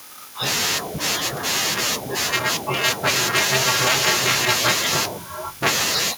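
At 2.34 to 2.36 s, again from 2.84 to 3.09 s, and across 3.35 to 4.69 s, the speech's loudest peaks get flattened, about 6, 7 and 9 dB over, with only a small share of samples hit. It's likely microphone overload, giving a harsh, crackly edge.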